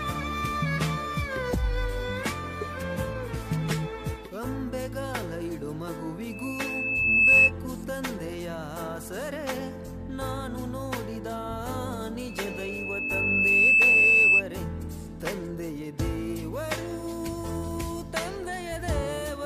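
Loudspeaker feedback squeal appears from 6.31 to 7.52 s and again from 12.29 to 14.43 s. A mic–speaker loop exceeds unity gain at 2.6 kHz, so a single tone swells over about a second, then a second and a half, towering over the sound. On a spectrogram it is a bright horizontal line at 2.6 kHz.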